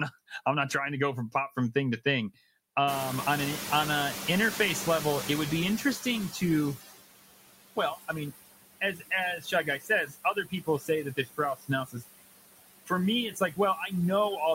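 Noise suppressor artifacts run through the whole speech clip. The suppressor pulls down the bands it judges to be steady noise by about 19 dB, frame by frame. The background therefore sinks in the gaps and comes back up underneath the speech, giving a pumping residue.

At about 3 s the room noise jumps by roughly 24 dB. From 2.87 to 6.76 s the noise suppressor is catching up: its noise estimate lags the new level, so the louder background passes with only about 13 dB of reduction at first. It then settles lower over the 3.9 s the estimate takes to adapt.

Speech is cut by the noise suppressor at 8.81–9.12 s (about 12 dB deep), 9.38–9.90 s (about 13 dB), 10.07–11.39 s (about 19 dB), 11.55–12.04 s (about 18 dB) and 13.30–13.59 s (about 12 dB). In each span the suppressor treats part of the speech as noise and turns it down with the background. Between a tenth and half a second of each stretch is affected, and those portions sound swallowed and faint.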